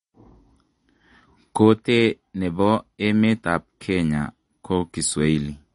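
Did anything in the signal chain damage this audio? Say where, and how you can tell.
Yes, at the codec stage, and it runs the whole clip. Nothing comes through above 10.6 kHz, and the speech has a plainly audible watery swirl with metallic chirps on s sounds. That's likely MP3 compression starved of bits, which fits a bitrate around 40 kbps.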